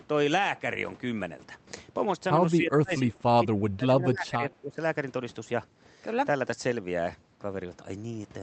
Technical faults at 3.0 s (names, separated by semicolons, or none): speech suppressed in double talk